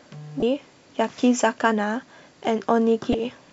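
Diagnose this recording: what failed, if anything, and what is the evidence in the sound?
The failure is in the codec stage: damaged data in a compressed stream. Two brief glitches break the speech, from 0.39 to 0.43 s and from 3.11 to 3.15 s, each about 30 ms. Corrupted bytes make the decoder misread those frames and lose sync until it finds the next frame header.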